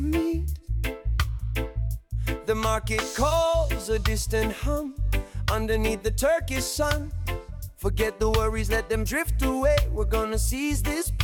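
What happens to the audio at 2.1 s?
Nothing goes wrong at 2.1 s: the audio carries straight through that moment with no audible fault.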